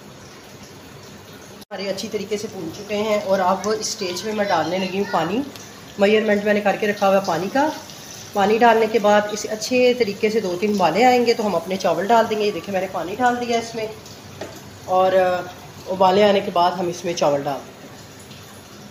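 No dropouts, clicks, distortion, level jumps or timing errors can be heard anywhere in the recording.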